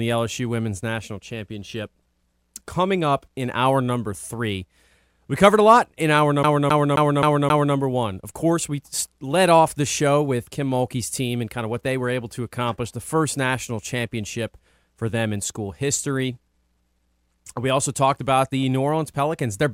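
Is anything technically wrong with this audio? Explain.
Yes. From 6.43 to 7.75 s the speech gets caught in a CD stuck on one turn: a scratch knocks the laser back one track at the same point on each revolution, so a single 264 ms slice plays five times over, with a brief mute at every jump. It sounds like a fast, even, mechanical stutter. On a waveform you'd see five identical blocks separated by tiny gaps; on a spectrogram, the same pattern repeated at a steady rhythm, broken by thin vertical silences.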